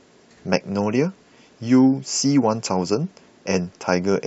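No audible technical faults occur anywhere in this recording.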